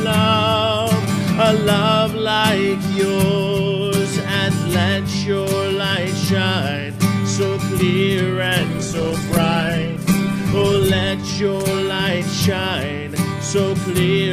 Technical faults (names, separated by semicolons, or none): call bitrate drop